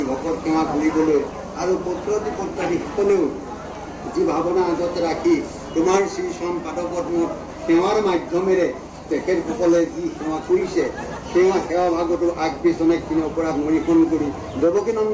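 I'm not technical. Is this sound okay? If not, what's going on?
Yes, nothing in this sound stood out as a problem when I listened to it.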